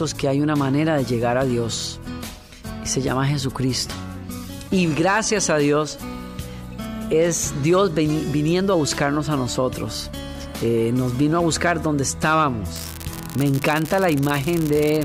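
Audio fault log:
12.76–15.04 s, unreliable data bit: a steady crackling fizz starts suddenly and runs to the end, carrying on through pauses too. One marginal data line flips its bit in a random share of samples, and each error jumps by the same step of about -9 dBFS.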